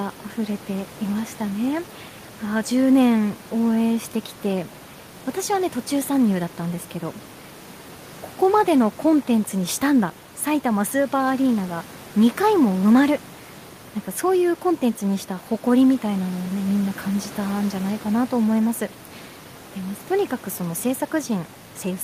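There are no technical faults to describe in this speech clip; the only thing heard beneath the talking is the room's own background noise, sitting about 22 dB below the speech.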